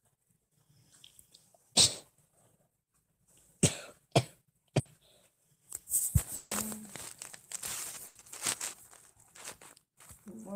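At 4.79 to 4.87 s there's a burst of packet loss: about 60 ms gets filled by stretching the last sound into a fading buzz or hiss, then the audio jumps ahead. From 6.35 to 6.53 s the sound smears into a held, fading buzz or hiss for about 160 ms and never goes fully silent before resuming further along, likely a long network dropout. Around 7.31 to 7.35 s there's a short concealed packet loss, a quick 20 ms patch that comes across as a tiny smear or wobble. A second burst of packet loss hits at 8.07 to 8.17 s, with about 80 ms of decaying fill before the audio picks up past the gap.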